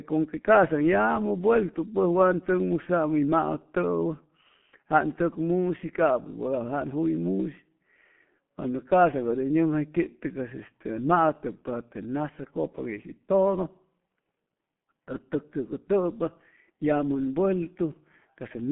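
From start to finish the speech passes through the G.723.1 codec, an early internet-telephony coder that rebuilds the voice from a coarse model refreshed only every 30 ms frame. The result is muffled and hoarse, with smeared consonants and nothing above 4 kHz, on a line band of roughly 150 Hz to 3.4 kHz. The heavy, gritty damage points to a rate near 6 kbit/s. Plain band-limiting alone would sound dull but clean, without this roughness.

From 17.50 s to the end, pre-emphasis is left on. A treble boost following the FM 75 µs curve was applied and never undone, lifting highs by about 13 dB at 10 kHz relative to 1 kHz. The last stretch suddenly turns thin, bright and hissy. Unlike a bad equaliser setting or a brighter microphone, the lift rises smoothly and steadily with frequency, the signature of that standard curve.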